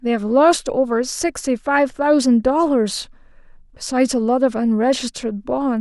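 Nothing stood out as a technical fault on listening to this speech recording.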